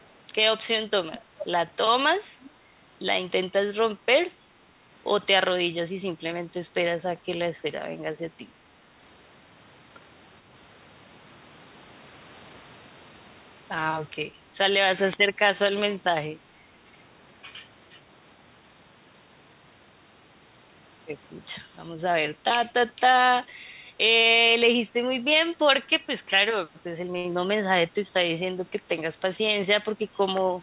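Echo leak at 0.01–0.06 s, 1.13–1.2 s, 1.39–1.46 s and 2.43–2.5 s: scraps of the speech return 440 ms late, at roughly −40 to −15 dB relative to the speech, likely a far-end loudspeaker echo the canceller missed. A short stall from a late packet at 27.18–27.26 s holds a sound for 62 ms while the empty jitter buffer waits, then resumes without losing anything. A jitter buffer speed-up from 29.24 to 29.96 s trims roughly 70 ms of pitch periods, so the speech runs about 7% fast at unchanged pitch, over the call path's narrow band that stops at 4 kHz.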